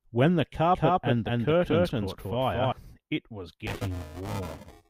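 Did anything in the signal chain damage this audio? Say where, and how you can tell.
Yes. Doubled audio track, 0.74 to 2.72 s: an equally loud, dry copy trails by about 200 ms and cuts in and out abruptly, likely a second capture path mixed in.

Buffer tearing, 3.67 s to the end: a 375 Hz rattle under the speech fits a 128-sample driver buffer, where a large part of each period replays audio about 10 ms old.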